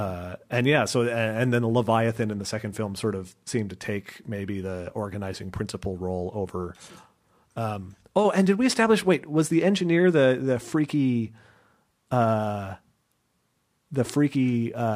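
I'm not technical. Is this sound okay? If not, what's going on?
Yes, this recording sounds fine, with nothing going wrong anywhere in it that you'd need to worry about.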